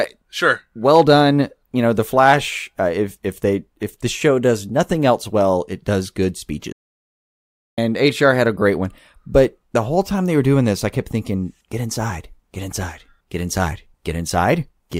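A playback stall interrupts the speech from 6.72 to 7.78 s, just after "well it does good". The output drops to silence for about 1.06 s in mid-flow before the speech carries on. The likely cause is the player briefly running short of buffered data, or its playback thread being held up, so nothing reached the output until it recovered. The break is heard as an abrupt, unnatural gap rather than a pause in delivery.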